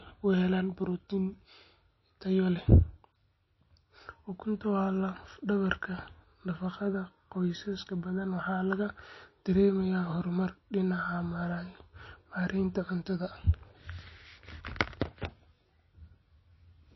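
MP3 compression damage runs through the whole of this speech recording: nothing is heard above about 5.8 kHz, and the remaining sound has a plainly audible watery, swirling texture. This is likely the work of an MP3 encoder starved of bits. It cuts the treble at a fixed frequency and drops weaker frequency lines that flicker in and out from frame to frame, which smears consonant attacks and dulls s sounds. The depth of the damage fits a low bitrate, roughly 25 kbps.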